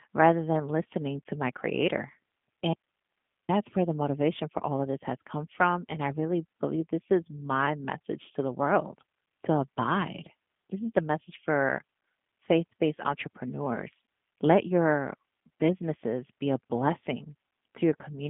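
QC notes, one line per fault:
Throughout, G.729 codec: the audio sits in a narrow telephone band, roughly 150 Hz to 3.5 kHz, with nothing above 3.7 kHz, and carries a plainly audible rough, synthetic edge. That fits the 8 kbit/s G.729A scheme, which rebuilds each 10 ms frame from a vocal tract filter, a pitch predictor and a few pulses. This coarse, steady remodelling sets it apart from simple band-limiting, which would sound muffled but not buzzy.
2.73 to 3.49 s, audio dropout to a faint residue: the signal vanishes abruptly for about 0.76 s, leaving only hiss roughly 55 dB below normal level, then cuts straight back in on "where the motivation for". The hiss shows the path downstream stayed live, so this is likely a break in the source feed rather than a muted or disconnected output. The hard edges at both ends rule out a natural pause or a fade.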